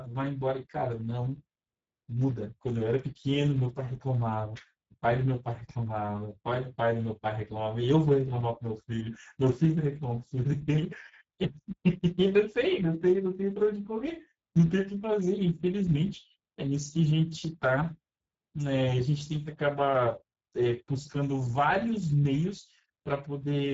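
All the way through, the speech carries plainly audible Speex codec damage, hoarse and noisy, consistent with roughly 10 kbps, with nothing above 7.7 kHz.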